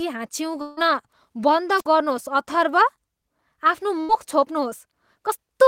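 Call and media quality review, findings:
Long network dropout, 0.61 to 0.79 s. Symptom: speech gives way to a held, fading buzz or hiss for roughly 150 ms, then resumes further on. No silent gap. Likely component: network transport. Mechanism: a stretch of about 160 ms never arrived. Receiver concealment extended the last sound throughout, and speech picks up with that span missing.

Wireless microphone squelch dropout, 1.77 to 1.87 s. Symptom: brief swell of hiss or static, then a near-silent hole of about 55 ms, then speech returns. Probable component: analogue FM radio mic link. Mechanism: RF signal faded below threshold. Receiver squelch muted output until the carrier recovered.

Burst of packet loss, 4.01 to 4.11 s. Symptom: speech freezes into a short held buzz or fading hiss, then jumps ahead. Probable component: jitter buffer and concealment on the receive path. Mechanism: about 80 ms of consecutive packets lost or arrived too late. 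Concealment repeated the last sound while lowering its level, then playback resumed past the lost 80 ms.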